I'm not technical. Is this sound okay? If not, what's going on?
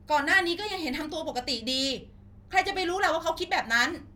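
Yes, it sounds fine, with nothing wrong to report.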